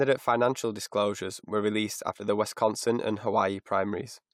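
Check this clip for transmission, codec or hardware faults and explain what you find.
No faults heard anywhere in the speech, so there is nothing to report.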